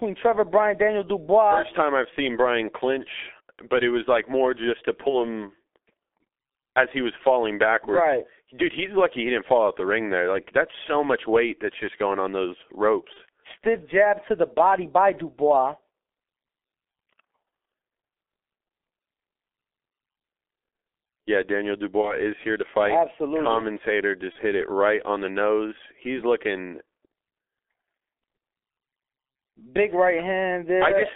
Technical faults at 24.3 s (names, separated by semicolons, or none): G.723.1 codec; VoIP packet loss concealed by the speech codec